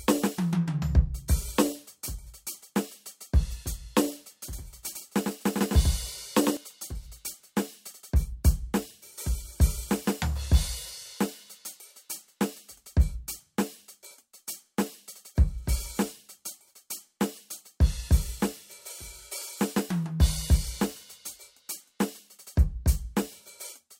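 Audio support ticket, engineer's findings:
Music smeared by a flat, full-band slapback, about a tenth of a second behind, a few dB under the original, no decay or room colour. Starts and stops abruptly, 4.53 to 6.57 s. Doubled audio track: likely a second capture via a slower path, mixed in.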